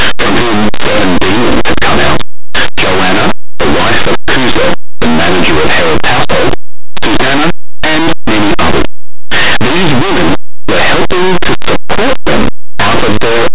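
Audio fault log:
throughout: linear audio read as companded. Plain 8-bit speech samples are decoded as mu-law, so values just on one side of zero jump to the largest outputs, giving harsh distortion.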